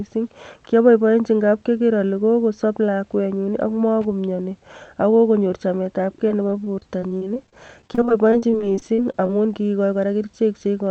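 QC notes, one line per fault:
6.28–9.30 s, repeated packet loss (robotic sound): right after "magomiani ak kokonyor chametabke", dozens of short holes (longest 38 ms, about a sixth of the span) are each patched by stretching the preceding sound, so the speech turns choppy with fragments missing.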